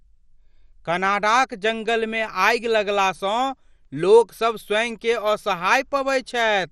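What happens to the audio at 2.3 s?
At 2.3 s the speech carries the same damage heard across the whole clip, likely from MP2 compression. Nothing above 15 kHz survives, so the sound is dull, and the remaining upper sub-bands flicker in and out with a gurgling, granular texture. The encoder splits the signal into 32 bands and, starved of bits, drops or coarsely quantises the higher ones. The plainly audible degradation points to a low rate, around 64 kbps.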